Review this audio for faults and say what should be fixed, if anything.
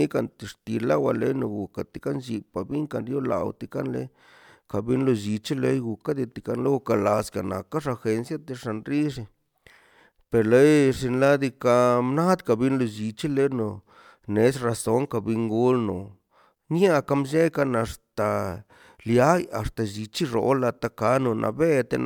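No technical faults can be heard anywhere in this speech recording. Nothing needs to be fixed.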